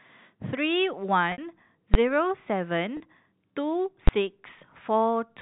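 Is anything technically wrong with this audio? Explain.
Yes, there are two kinds of fault, each occurring twice, heard through a telephone-band G.711 channel.

Packet loss with pitch repetition occurs at 1.32 to 1.38 s (60 ms) and 2.97 to 3.00 s (30 ms), which suggests two lost packets and then one. The receiver loops the last pitch period and fades it over about 50 ms. The 30 ms gap sounds like a briefly held, buzzy tone. The 60 ms gap buzzes, decays toward silence, then cross-fades back into the speech. On the waveform this shows as identical repeating cycles shrinking in amplitude. On a spectrogram it shows as frozen, flat harmonic stripes.

Invalid numbers at full scale occur at 1.94 s and 4.08 s. A calculation produced infinite or invalid values, which were pinned to maximum level for roughly 12 ms, fitting a 512-sample block. Because each block is so short, each one sounds as a single loud bang. 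The waveform shows a block held flat at one extreme, far beyond the speech peaks, and the spectrogram shows a bright broadband vertical stripe.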